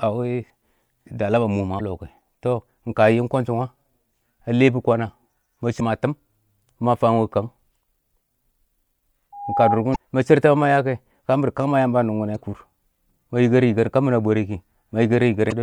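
Speech with two kinds of fault. Damaged data in a compressed stream produces five brief glitches of about 40 ms each, at 1.77–1.81, 5.76–5.81, 9.92–9.96, 12.32–12.36 and 15.48–15.52 s. Each is the decoder misreading corrupt frames and resyncing. A loudspeaker feedback squeal at 813 Hz runs from 9.32 to 9.79 s. It swells over roughly a third of a second to a few decibels above the speech, which marks it as a runaway mic-speaker loop rather than steady hum or interference.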